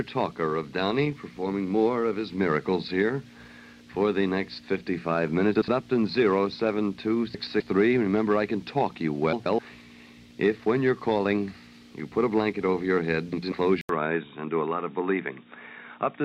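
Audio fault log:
5.55–5.68 s, 7.34–7.61 s, 9.33–9.59 s, 13.33–13.53 s: frames out of order. In each stretch two neighbouring blocks of audio are decoded in swapped order, so the second half plays before the first. The blocks are about 64, 128, 128 and 96 ms long, which fits runs of two to four frames. The result is a brief garbled flutter. No time is lost.
13.81–16.25 s: input switched to a poorer device. An 80 ms silence opens the change. From that point to the end the sound turns dull and boxy, with nothing above 3.8 kHz. A new background noise floor, about 45 dB under the signal, comes in, while the overall level stays roughly the same. The likely cause is the recording path moving to a narrower-band microphone or a headset call profile partway through.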